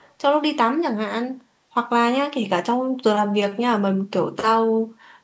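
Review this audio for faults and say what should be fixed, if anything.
Echo leak at the very start, from 0.0 to 0.14 s: a very faint copy of the speech returns about 212 ms after the original. The likely cause is a far-end loudspeaker whose echo canceller let some of its microphone pickup through. Unlike room reverberation, which smears each sound continuously, this is a distinct, separated repeat at one fixed delay. To prevent it, the far end should use a headset or a better-converged echo canceller.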